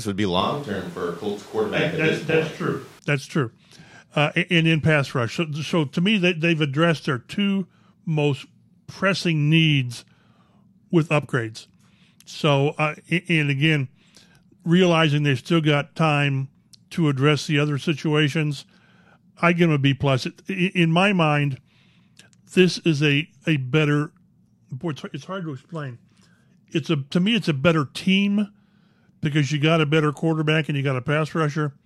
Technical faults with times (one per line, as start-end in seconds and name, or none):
0.41-2.99 switch to a distant microphone